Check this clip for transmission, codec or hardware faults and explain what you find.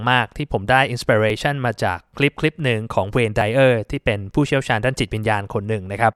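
Two faults stand out in the speech. At 1.30 s and 3.41 s the audio makes a sudden skip forward, likely a dropped buffer (overrun): incoming samples were overwritten before being read, losing about 10 ms and then about 30 ms, and the remaining audio was spliced straight together. Unlike an underrun or dropout, there is no silent gap.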